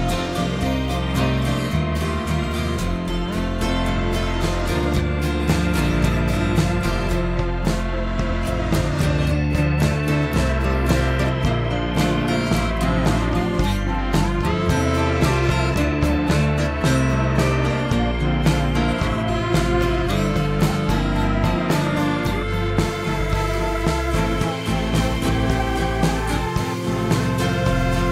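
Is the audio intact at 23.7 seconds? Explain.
Yes, the audio at 23.7 seconds is intact, with no dropout, click, distortion or other fault at that moment.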